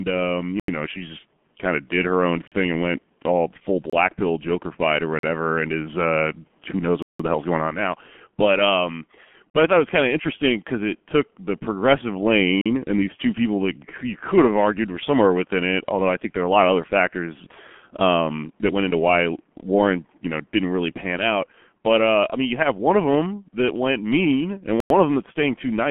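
Throughout the recording the speech carries the sound of the G.723.1 codec at 6.3 kbit/s. Nothing reaches above 3.7 kHz, and the usable band runs from about 150 Hz to 3.4 kHz, so the voice is muffled and thin. The damage is heavy. The codec works on 30 ms frames and adapts its model of the voice slowly, so the voice has a hoarse, rough texture and consonants smear together.

Eight blocks of digital silence cut into the audio at 0.60 s (85 ms), 2.48 s (43 ms), 3.90 s (27 ms), 5.19 s (43 ms), 7.02 s (171 ms), 9.50 s (43 ms), 12.61 s (43 ms) and 24.80 s (99 ms). Each time, the signal drops straight to silence and returns with no fade, leaving a short hole. The longest gap, at 7.02 s, is a clear dropout. Most lengths fit whole buffers of 2048, 4096 or 8192 samples at 48 kHz, which points to output buffers not being filled in time.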